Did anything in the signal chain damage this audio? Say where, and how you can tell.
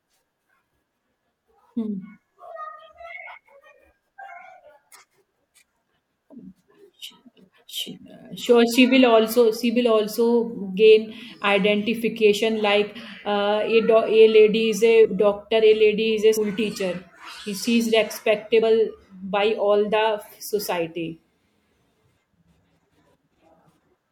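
Yes. Speech jumps ahead at 15.04, 16.36, 18.61 and 23.80 s. At the codec stage, compressed frames were skipped, dropping whole 24 ms frames.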